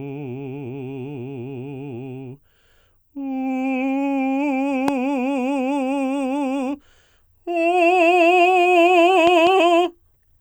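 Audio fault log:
4.88–4.90 s, loud pop: a sudden voltage step, likely from a plug, switch or static discharge, enters the signal path, and the downstream circuitry turns it into one sharp pop about 15 dB above the music, which plays on underneath.
9.27–9.49 s, loud pop: a second disturbance of the same kind, again likely electrical, produces two pops in quick succession, peaking about 15 dB above the music.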